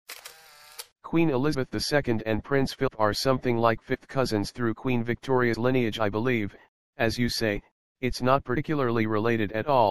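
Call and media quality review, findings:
MP3 compression throughout the clip. Watery, swirly texture. Weak detail flickers in and out between frames. Attacks smeared. Probable component: the encoder, likely starved of bits. The damage level fits a low bitrate of around 64 kbps. Too few bits leave the encoder dropping high frequencies and zeroing quiet spectral lines. Plainly audible for the full duration.

Compressed frames skipped, five events. The sound jumps forward at 1.53 s, 2.86 s, 3.93 to 3.95 s, 5.53 s and 8.56 s. Each join is a short smeared blip, not a hard click. The smear comes from overlapping frames blending across the gap. Roughly 100 ms is lost at 1.53 s and 8.56 s, about 150 ms at 2.86 s, and about 50 ms at 3.93 s and 5.53 s. The jumps fit whole 26.1 ms frames being dropped. Probable component: transport or decoder, with frames lost or rejected as corrupt.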